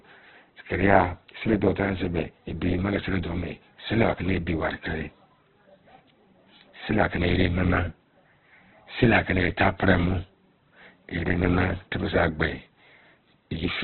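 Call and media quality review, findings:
Speech muffled and band-limited the whole way through, nothing above 4.2 kHz. Heavy grain and roughness. Likely Opus compression at a very low rate, around 8 kbps, with CELT starved of bits and patching bands with folded or noise fill.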